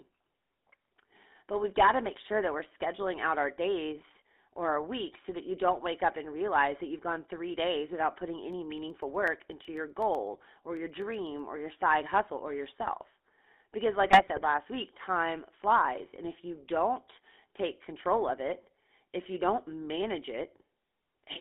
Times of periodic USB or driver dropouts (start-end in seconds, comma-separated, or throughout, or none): 8.53-11.39